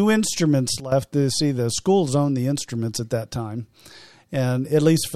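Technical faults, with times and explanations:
0.80–0.92 s, sudden gain jump: the level of the speech drops abruptly by about 13 dB and stays down for roughly 0.12 s. The background noise falls by the same amount at the same instant, which shows the whole signal was scaled rather than the talker changing level. The step is immediate, with no fade in or out, so the likely cause is a digital gain change applied between one sample and the next without a ramp.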